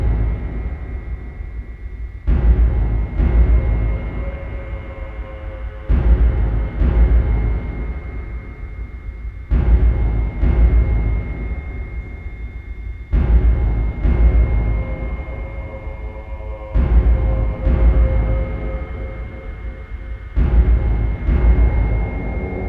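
Nothing stood out as a technical problem on listening to this audio.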